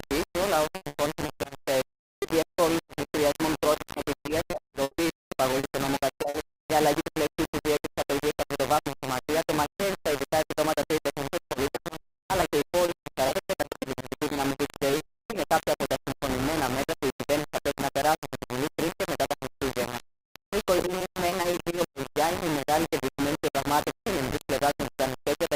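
Throughout, the signal was likely reduced to very few amplitude steps by rounding without dither, pointing to roughly 3-bit resolution. The error tracks the sound itself, leaving a harsh, grainy distortion nearly as loud as the signal, with quiet parts crumbling or sputtering.

From 0.75 to 3.06 s, 3.58 to 6.67 s, 11.52 to 15.33 s and 20.77 to 22.04 s, repeated packet loss (robotic sound) strikes. Each missing chunk, up to 110 ms long, is patched by extending the preceding sound. That gives a choppy stutter with pieces missing across 12 to 19 percent of each stretch.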